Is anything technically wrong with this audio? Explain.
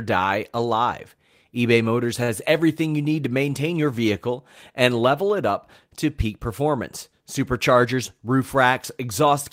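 Yes. At about 2.23 to 2.31 s there is a short stall from a late packet. A packet arrived after it was due, so the jitter buffer ran dry, and the receiver filled the gap by stretching the last stretch of speech for about 50 ms until the data caught up. Nothing is lost, but playback resumes 50 ms later than before, and the held sound is audible as a brief unnatural sustain with a faint buzz or dip.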